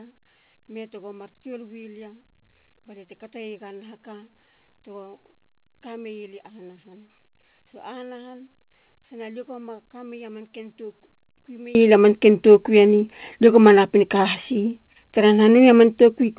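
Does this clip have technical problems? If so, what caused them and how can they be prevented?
Yes. One channel inverted, from 0.0 to 11.75 s: the speech level collapses by about 24 dB and turns faint, recovering just before "lia manken tokui eni". The likely cause is one stereo channel with reversed polarity, so when both are summed to mono the centred speech, common to both sides, cancels and only their small difference survives. Prevent it by checking the polarity of each channel, cable and input before recording or mixing down to mono.

Scattered short gaps, between 3.98 and 4.68 s: about four brief holes, the longest roughly 10 ms and around 30 ms in all, heard as tiny ticks and smeared hiccups in the speech. Packets arrived late or were lost, and the receiver covered each hole by stretching the preceding sound, which keeps the speech intelligible but leaves these small glitches. The band-limited sound, with nothing above 4 kHz, fits a narrowband call codec. 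Prevent the gaps with a steadier network connection and a larger jitter buffer.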